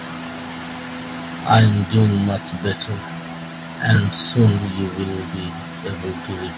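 From 1.51 to 1.67 s the loudest speech turns harsh and crackly, its peaks flattened about 5 dB past the converter's limit. About 15% of samples are clipped, likely from microphone overload at too high an input gain. At 1.6 s the level of both voice and background drops suddenly by about 3 dB, likely because the call software stepped the microphone volume down during that distorted burst. The same gritty, crackling edge returns from 1.95 to 2.06 s, about 4 dB over, then more faintly from 3.89 to 3.98 s, about 3 dB over, and again from 4.39 to 4.5 s, about 4 dB over. Each recurrence is the same overload clipping the peaks. Throughout, nothing is heard above 4 kHz, which fits a G.711 call path.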